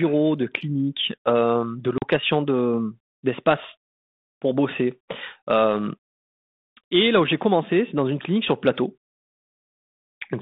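A speech recording on a G.726 ADPCM line at 32 kbit/s, band-limited to roughly 200 Hz–3.7 kHz, with packet loss on the ADPCM call from 1.98 to 2.07 s. About two packets, some 40 ms, drop to a hard-edged silence. Unlike a simple dropout, the audio then returns with brief, slight distortion. This happens because the decoder's adaptive predictor and step size have drifted from the sender's, and the sound settles only once they realign.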